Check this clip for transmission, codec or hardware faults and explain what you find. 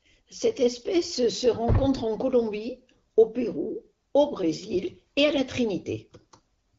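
No transmission, codec or hardware faults turn up in this speech clip, which comes through an AMR wideband (HD Voice) link at 12.65 kbit/s.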